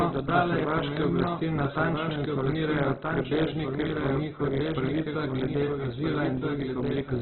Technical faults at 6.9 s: doubled audio track; Opus compression

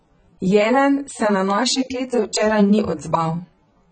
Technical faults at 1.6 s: AAC compression

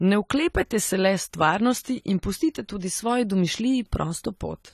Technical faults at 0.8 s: AAC compression

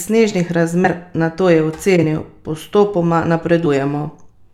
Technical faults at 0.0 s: none

